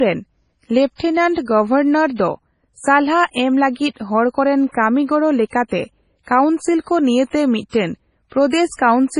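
From start to finish the speech has nothing above about 10.5 kHz, with smeared, swirly high detail. This is likely low-bitrate audio saved at a high bitrate: a very low-rate MP3 re-encoded at a high rate. Unlike a plain low-pass filter, the coding artefacts remain beneath the cut-off.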